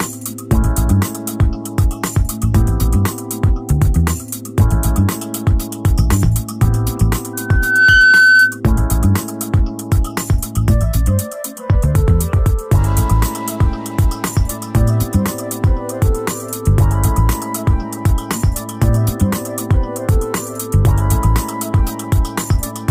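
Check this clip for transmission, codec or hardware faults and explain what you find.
One hardware fault stands out: loudspeaker feedback squeal from 7.33 to 8.60 s. A loudspeaker-to-microphone loop exceeds unity gain at 1.5 kHz, so a pure tone swells over roughly half a second to about 5 dB above the audio. Unlike a steady interference tone, it grows by itself.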